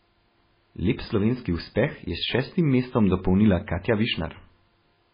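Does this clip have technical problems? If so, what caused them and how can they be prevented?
Yes. Throughout, the speech sounds watery and swirly with nothing above 5 kHz, likely MP3 compression at a very low bitrate, around 16 kbps. Prevent it by encoding at a higher bitrate.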